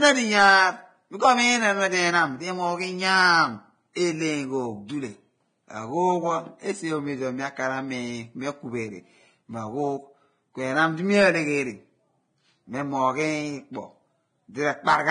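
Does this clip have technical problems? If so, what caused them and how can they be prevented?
Yes. The whole clip is hissy and grainy, with nothing above 9.7 kHz and heavy damage to the upper detail. That's likely Vorbis compression at a low setting, which fits a bitrate somewhere near 23 kbps: the codec drops the top end and quantises the remaining treble so coarsely that fine speech detail turns into rough noise. Encoding at a higher quality setting would keep that detail intact.

There's also pre-echo at 3.93 to 3.96 s, at 5.69 s, and at 13.73 to 13.75 s. Each is a brief smear of hiss, roughly 18 to 26 ms long, sitting just ahead of a sharp attack. The codec spreads its quantisation noise across the whole transform block, so the noise meant for the loud onset leaks into the quiet moment before it. A higher bitrate, or an encoder that switches to short blocks on transients, would keep those onsets clean.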